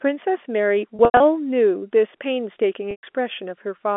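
From 0.96 to 1.20 s, packet loss with pitch repetition: about 150 ms goes missing in several gaps, the longest 90 ms. The last pitch period is repeated as a buzzy held tone that fades to silence, unlike a clean dropout or click. The same happens from 2.91 to 3.03 s over about 120 ms, heard through the 250 Hz to 3.5 kHz telephone band.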